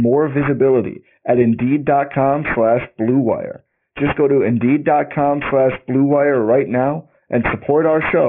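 Aliasing runs through the whole clip: sibilants turn gritty and metallic, with wrong tones folded down around 3 kHz, fitting a drop to about 6 kHz, unlike plain muffling.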